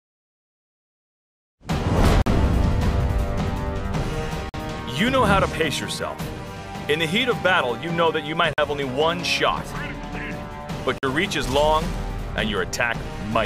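The audio has four blocks of digital silence, at 2.22, 4.49, 8.53 and 10.98 s, each about 46 ms long, which fits a 2048-sample buffer left unfilled. Unlike a faded dropout, each hole has abrupt edges.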